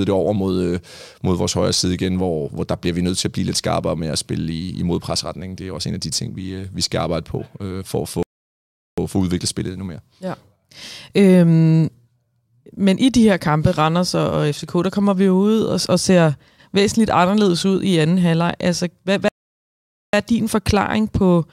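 Speech goes silent from 8.23 to 8.98 s and from 19.28 to 20.13 s, two playback stalls, likely from the player running out of data, before resuming.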